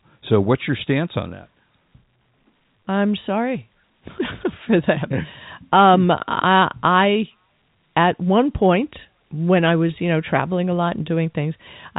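Nothing stood out on listening to this speech, which comes over the G.711 telephone coding with its band ending around 3.8 kHz.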